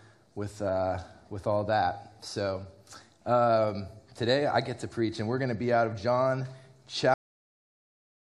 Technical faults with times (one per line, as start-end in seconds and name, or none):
7.14-8.37 cut-off end